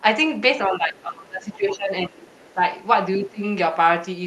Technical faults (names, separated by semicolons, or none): speech suppressed in double talk; other side's voice leaking through